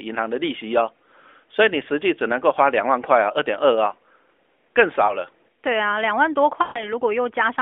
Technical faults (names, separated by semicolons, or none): lost AMR speech frames